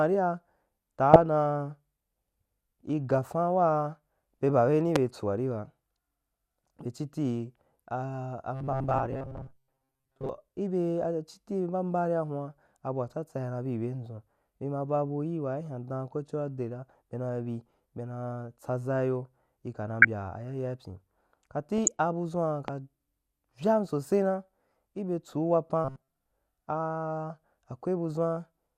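Right at the start there's DAB burbling, from 1.13 to 1.22 s and again from 2.79 to 3.00 s. Bit errors from weak reception are slipping past the error correction into the MP2 data, a small fraction of a percent of bits going wrong. Corrupted samples put short blips of noise into individual sub-bands, and corrupted scale factors make sub-bands jump in level for up to a frame, so you get that burbling riding over the speech for those brief stretches.

At 4.96 to 4.98 s there's a single loud pop, peaking roughly 20 dB above the speech. It's a sharp, hard click that sits on top of the audio while the speech carries straight on underneath. That's most likely an electrical step or spike getting into the chain, something like a plug, a switch or a static discharge.

From 8.54 to 10.29 s the speech goes robotic. It becomes a rigid, metallic buzz at 133 Hz that still loosely tracks the speech. The likely cause is audio arriving too slowly, with the software filling the gaps by looping a tiny chunk. 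That buzz points to a segment of about 7.5 ms, and most of the real audio there is being replaced by repeats.

The burbling comes back at 20.02 to 20.05 s and at 21.78 to 21.88 s. A second pop lands at 22.68 to 22.71 s, roughly 15 dB above the speech, so it's a bit softer than the first. Then the same 133 Hz robotic buzz returns briefly from 25.85 to 26.16 s.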